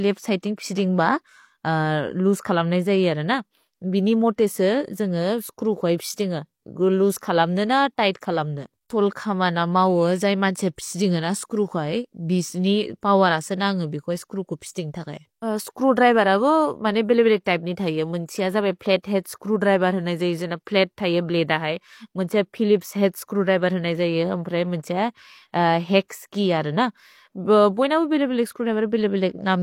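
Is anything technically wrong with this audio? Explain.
Yes, there's pre-echo in this speech clip, at about 19.03 s and again at 26.08 s. A transform codec spreads quantisation noise across its whole block, so when a sharp onset lands near the end of one, noise scaled for that loud moment leaks into the quiet stretch just ahead of it. Here that smear runs about 16 ms and 18 ms, heard as a short hiss just before each attack, which also loses some of its crispness.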